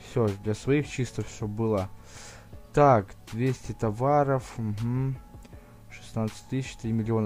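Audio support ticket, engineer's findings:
No dropouts, clipping, glitches or level faults found on the signal path; nothing to escalate.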